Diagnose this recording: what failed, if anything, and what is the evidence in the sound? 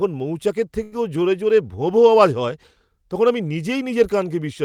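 The network stage failed briefly, causing a short stall from a late packet. At 0.83 s the speech holds on one sound instead of moving on, until about 0.94 s. The held stretch carries a faint buzz or a slight dip in level. A packet missed its playout time and the jitter buffer ran dry. The receiver extended the last sound by 85 ms, then resumed from the same point. Nothing was lost, but playback now runs 85 ms later.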